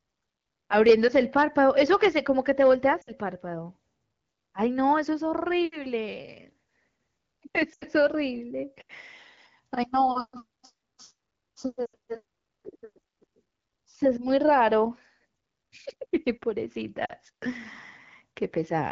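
Lost AMR speech frames occur at 3.02 s, 7.74 s, 11.86 s and 17.06 s, lasting about 60, 80, 80 and 40 ms. Each sounds like a brief dropout that fades to near silence and recovers roughly, as the decoder replays the last good settings at falling gain. On a spectrogram, harmonics flatten and fade. On the waveform, amplitude dips.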